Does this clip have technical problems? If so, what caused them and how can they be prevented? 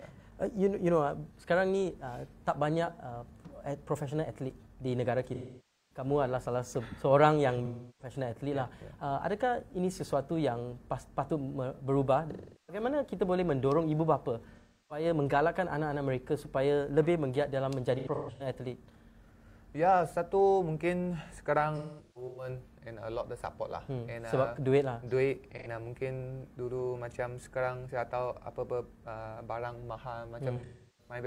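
Yes. AAC frame loss with concealment occurs at 5.34–6.05, 7.65–8.14, 12.31–12.83, 14.56–15.05, 17.97–18.47, 21.77–22.48, 25.58–25.67 and 30.56–31.14 s. Missing frames are rebuilt from the last good spectrum, which produces smeared, noisy patches of up to about 0.55 s. Use forward error correction, retransmission or a deeper jitter buffer to prevent it.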